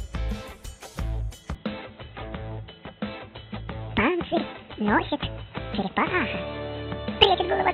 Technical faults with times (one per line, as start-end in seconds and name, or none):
1.55-7.73 input switched to a poorer device